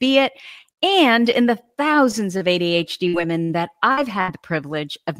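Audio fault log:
2.37 to 2.48 s, short stall from a late packet: the speech hangs for an instant, one sound held slightly too long with a faint buzzy flatness before it carries on cleanly. A packet arrived late and the jitter buffer emptied, so the receiver extended the last bit of sound by about 31 ms until the data showed up, then resumed from the same point. Nothing is skipped, but the timing shifts later by roughly that amount.
3.08 to 4.31 s, repeated packet loss (robotic sound): this stretch turns choppy, with small pieces of the speech dropping out. Four separate gaps hit within just over a second, the longest about 69 ms. Each hole was patched by repeating the preceding sound, around 243 ms of fill in total, covering roughly a fifth of the span, while about 180 ms of the original speech is simply gone.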